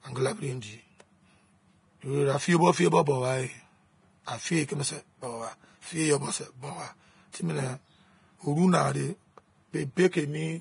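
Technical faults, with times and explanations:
Throughout, Vorbis compression: the speech sounds hissy and grainy, with rough vowels and smeared consonant onsets, likely from heavy low-bitrate Vorbis coding, which fits a rate near 30 kbps. The encoder keeps the broad spectral shape but quantises the treble so coarsely that fine detail turns into noise of similar energy. A spectrogram shows a hard ceiling with nothing above 10.6 kHz, blotchy speckled texture in the upper bands, and softened attack edges in the waveform.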